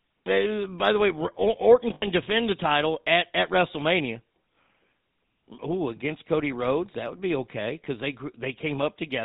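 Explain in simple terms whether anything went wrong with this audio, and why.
Two things went wrong here. The whole recording has been squeezed through the GSM full-rate codec, the old mobile-phone voice coding. It rebuilds the voice from a rough model of the throat and mouth driven by a coarse pulse pattern, and it throws away everything above 4 kHz. That's why the speech sounds muffled and buzzy, with a gravelly edge that's easy to hear all the way through.

The second problem is lost GSM frames, from 1.94 to 2.07 s, just before "defend the title at". For about 80 ms the received data was bad, so the decoder kept replaying the last good chunk. You hear the sound freeze into a short, rough, metallic ring instead of the speech that should be there, and then the voice picks up again.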